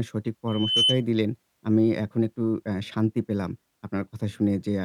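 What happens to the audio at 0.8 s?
Loudspeaker feedback squeal, 0.47 to 1.03 s: the microphone re-amplifies its own loudspeaker at 3 kHz. Unlike a steady hum, the single tone swells over about a third of a second, rising somewhat above the speech.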